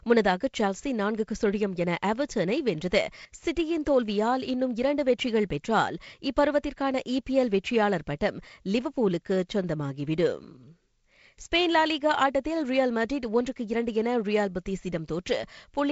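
No technical faults are audible.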